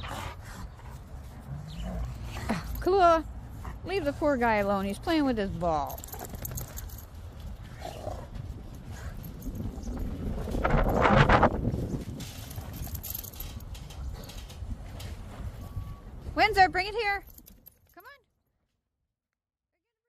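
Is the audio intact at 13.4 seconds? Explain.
Yes, the audio is intact at 13.4 seconds, with no fault present at that moment.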